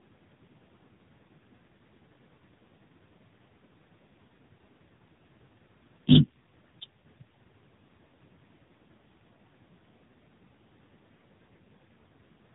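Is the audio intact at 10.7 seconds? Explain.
No. At 10.7 s, as throughout, the speech sounds rough, muffled and warbly with nothing above 3.8 kHz, from tandem speech coding: two speech codecs in a row, ending in AMR-NB, each recoding the previous one's degraded output.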